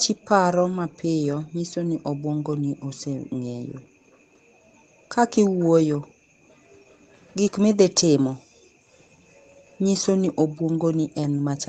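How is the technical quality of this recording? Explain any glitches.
The recording has two kinds of glitch: faint echoes of the speech in three places and one brief dropout of the room background.

Echo leak, at 0.08–0.27 s, 4.09–4.2 s and 9.66–9.79 s: a very quiet copy of the speech returns about 0.35 s late, likely because a loudspeaker's sound slipped past the far end's echo canceller.

Background gated by the echo canceller, at 8.44–8.75 s: the canceller clamped the microphone while the loudspeaker played, so the room sound falls away by about 37 dB for roughly 0.3 s, then returns.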